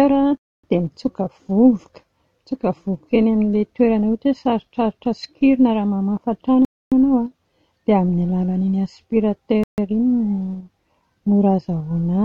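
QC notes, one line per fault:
0.37–0.64 s, 6.65–6.92 s, 9.64–9.78 s: Bluetooth stall. The audio drops to dead silence for about 0.26 s, 0.27 s and 0.15 s, then resumes (the first one right before "dia mitsoka"). This is likely the headphone buffer running dry while delayed packets were resent.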